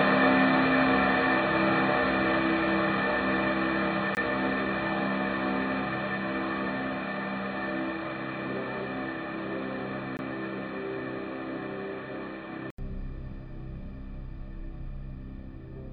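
Input switched to a poorer device from the start until 12.78 s. This recording of everyday sounds is dull and boxy over that stretch, with nothing above 4.5 kHz, then opens up after a silence of about 80 ms at the switch. The narrow band and the faint added background, roughly 40 dB below the sound, with no real change in level, point to a headset's call profile or lesser microphone as the likely cause. A gap between chunks appears at 4.15–4.17 s and again at 10.17–10.19 s, each a 20 ms hole. They recur every 6 s, which fits audio delivered in 6-second chunks with silence left at each join, from codec padding or a player that starts each chunk late. No sound is lost, but the flow is interrupted at each join.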